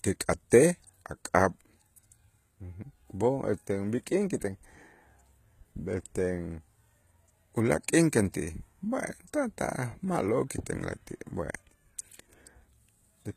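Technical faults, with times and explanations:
Throughout, HE-AAC compression. The speech has plainly audible coding damage, and nothing reaches above 14.9 kHz. The upper range sounds synthetic. Sibilants come across gritty and metallic. The likely cause is spectral band replication. The codec keeps only the lower spectrum. It copies those bands upward and shapes them with a coarse envelope. The rebuilt harmonics do not line up with the real ones. The damage fits a very low bitrate, around 20 kbps.
0.50 s, pre-echo. A brief hiss, about 15 ms long, arrives just ahead of a sharp onset. The attack itself sounds softened and smeared. The codec spreads its quantisation noise across a whole transform block. Here the attack falls late in that block. Noise sized for the loud part therefore leaks into the quiet moment before it. That leak is the short hiss heard just before the onset.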